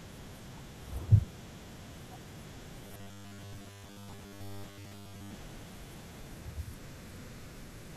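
Robotic sound from repeated short buffers, 2.87 to 5.35 s in this speech: a rigid 100 Hz buzz, likely from a 10 ms chunk repeated for most of that stretch.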